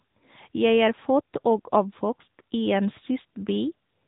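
From start to finish the speech carries the sound of the AMR narrowband mobile codec. Nothing above 3.8 kHz survives, so sibilants go dull. The vocal-tract model rebuilds the voice from a few pulses in each 5 ms, leaving a plainly audible buzzy, synthetic edge, which fits a mid-rate setting around 10.2 kbps.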